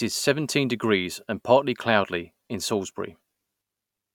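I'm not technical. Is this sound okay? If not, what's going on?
Yes, nothing's wrong here that I can hear, so there's nothing to worry about with this recording.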